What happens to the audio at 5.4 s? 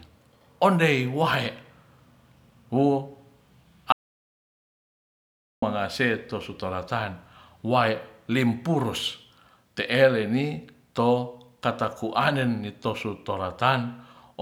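At 5.4 s the speech is gone in an audio dropout to silence, from 3.92 to 5.62 s. The input was likely lost and silence was written, leaving dead silence without room tone. Speech resumes on "tu su".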